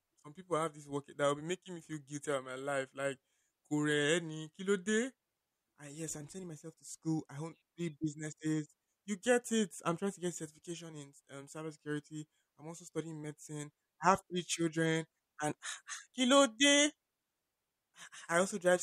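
No technical faults can be heard anywhere in the recording, and the speech signal stays steady throughout.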